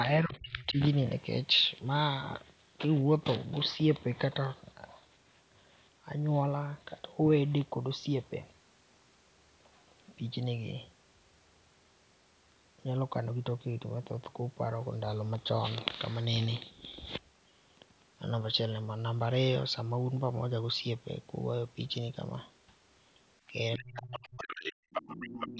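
From 0.04 to 0.8 s the talker's speech drops by around 30 dB, most likely speech suppressed in double talk: the echo canceller could not separate local speech from loudspeaker echo and turned both down. From 23.78 s to the end at 25.59 s the same happens more deeply, around 40 dB, so the voice dips for about a second and a half. Within that stretch, the other side's voice leaking through is audible at 23.78 to 23.99 s, 24.23 to 24.68 s and 24.94 to 25.47 s. It grows from faint, about 20 dB below the speech, to nearly level, about 5 dB below. This is residual loudspeaker sound that the canceller likely failed to subtract from the microphone signal.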